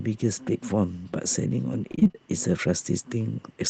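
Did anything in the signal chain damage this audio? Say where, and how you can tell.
Yes, on the network. Repeated packet loss (robotic sound) from 1.91 to 2.16 s: six gaps, half patched by repeating earlier sound, heard as choppy.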